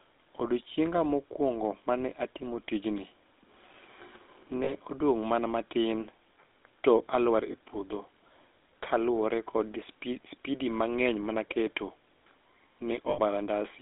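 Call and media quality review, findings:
GSM full-rate codec, whole clip. Buzzy, gravelly roughness on all speech, band-limited to roughly 200 Hz to 3.7 kHz. Regular-pulse excitation through a vocal-tract filter, coarsely sampled. Spectrogram: hard ceiling at 3.7 kHz, smeared harmonics, grainy texture between formants.

Lost GSM frames at 4.64 s (40 ms, just before "odong' mana matin"), 7.52 s (20 ms, between "to alwar" and "e puodho") and 13.1 s (80 ms). Brief metallic ring where the last good frame is replayed. Waveform: short repeats. Spectrogram: frozen stripes. Lengths fit one to four 20 ms frames.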